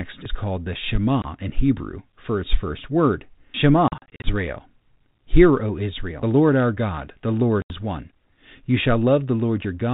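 Packet loss on an ADPCM call first hits at 1.22 to 1.25 s, right after "is called the": a single 20 ms gap of silence, which fits one lost packet. Between 3.88 and 4.30 s, about 180 ms drops out in short runs of up to 40 ms. At 7.62 to 7.71 s an 80 ms hole opens. Each gap cuts in abruptly. Because the 32 kbit/s G.726 decoder's predictor and step size lose track of the sender, the speech comes back after each gap with some distortion before settling.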